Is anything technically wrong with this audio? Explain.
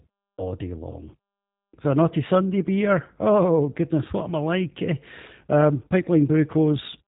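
Yes. Throughout the speech, the sound is narrow and faintly rough, with a slightly synthetic, buzzy edge and nothing above about 3.8 kHz. This is G.729 codec damage, plainly audible here. The codec discards the waveform itself and rebuilds each short frame from a vocal-tract filter, a pitch predictor and a few pulses, so fine detail is approximated. The result fits the 8 kbit/s G.729A variant, whose band limit removes the upper frequencies and dulls the sibilants.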